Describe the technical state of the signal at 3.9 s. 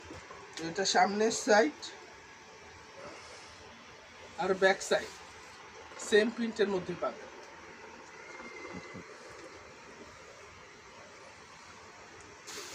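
At 3.9 s the signal is intact, with no dropout, clipping, glitch or other fault audible at that moment.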